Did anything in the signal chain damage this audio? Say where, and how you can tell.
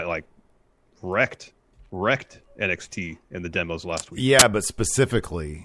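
Yes. Just after "the demos last week", from 4.39 to 4.42 s, a 25 ms burst of harsh static cuts in with abrupt edges. That is file tags played as audio, a fault at the storage and playback stage: the reader treated an embedded cover picture as samples. Compressed image bytes look random, so they decode as very loud white noise. On the waveform it shows as a solid, dense block; on a spectrogram, a flat broadband column with vertical edges.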